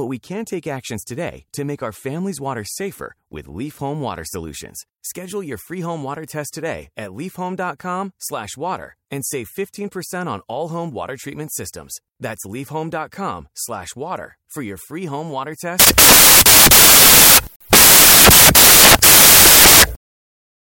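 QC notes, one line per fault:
15.80–20.62 s, samples built from the wrong bytes: from 15.80 s to the end of the clip, the reader assembles each sample from misaligned or wrongly ordered bytes, so the rapidly changing low-order bits land in the most significant position. The audio collapses into loud, harsh broadband noise.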